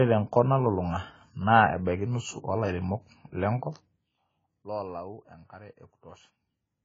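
Throughout the speech, nothing above 7.5 kHz and a dull, smeared, warbling texture on sibilants point to heavy AAC compression, likely AAC-LC at about 16 kbps.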